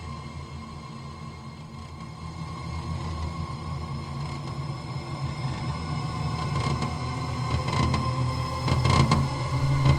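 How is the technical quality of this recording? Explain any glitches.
The quality is compromised by a call bitrate drop in the middle of the clip. From 1.66 s to 7.54 s the encoder starves for bits, and the sound turns rough and watery, with the top end dulled. This fits a fall from around 64 kbps to 26 kbps, bottoming out for about 3.1 s. On a spectrogram the high-frequency band visibly thins or cuts off in that span, with blocky, smeared texture below it. The waveform shows little change.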